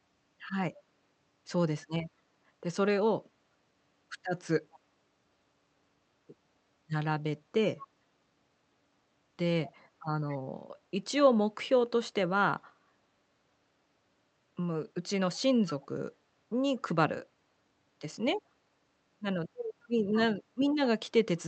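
Speech, with brief echo leak at 4.72, 7.77, 9.64, 10.29, 15.68, 16.76 and 20.12 s: faint copies of the voice returning about 0.21 s late, likely from a far-end echo canceller letting its loudspeaker pickup through. The fixed delay and separate copies set it apart from room reverberation, which decays smoothly.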